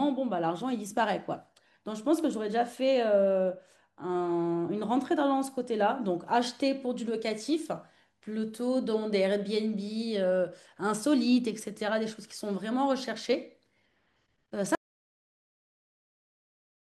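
At 14.75 s the speech cuts to total silence through the end, an audio dropout to silence, likely from lost input; the waveform flatlines and the spectrogram goes blank.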